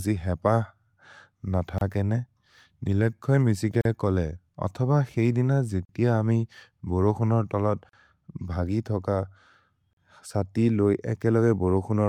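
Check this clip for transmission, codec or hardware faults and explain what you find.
Yes, there's one recurring fault: a gap at a join of encoded pieces, five times, roughly every 2 s. The silences hit at 1.78–1.81 s (about 29 ms), then 3.81–3.85 s just before "कोले अथब", 5.85–5.89 s, 7.89–7.93 s, and 9.93–9.97 s just before "सति लोइ" (40 ms each). The speech was encoded in 2-second chunks and spliced untrimmed, so each join keeps the encoder's startup delay and last-frame padding. You hear a brief dropout with smeared edges, then the speech carries on where it left off.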